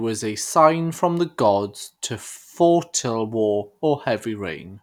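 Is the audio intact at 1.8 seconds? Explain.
Yes, at 1.8 seconds the speech is intact, with no dropout, click, distortion or other fault at that moment.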